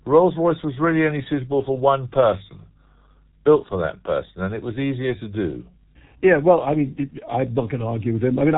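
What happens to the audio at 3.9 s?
At 3.9 s the speech carries the G.723.1 codec damage present across the whole clip. Its coarse 30 ms frames and slow voice-model updates, at a heavy compression level that points to roughly 6.3 kbit/s, leave it muffled and hoarse, with smeared consonants and nothing above 3.8 kHz.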